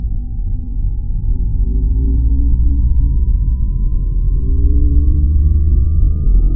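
No technical faults can be heard anywhere in the recording, and the signal holds steady throughout.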